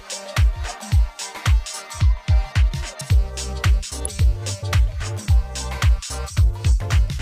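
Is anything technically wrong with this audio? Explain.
Yes. At 4.05 s a single sharp snap cuts in on top of the sound, lasting only a millisecond or so and peaking fairly loud, around -10 dBFS. This is an electrical switching spike: the likely cause is a nearby switch, motor or static discharge arcing briefly, with the audio line picking up that burst of interference. Because the arc is so short, it is heard as a tight click laid over the audio rather than as a gap or a change in tone.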